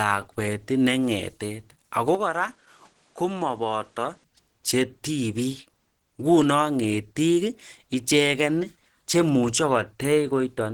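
Throughout the speech, the audio was likely encoded with Opus compression at around 16 kbps in its hybrid mode, leaving a hoarse, grainy roughness, although the band still reaches about 20.1 kHz.

From 2.15 to 4.24 s, the input likely switched to a poorer device. With no gap at either switch, the sound turns duller and cuts off above 10.8 kHz, drops a few decibels in level and gains a faint new noise floor.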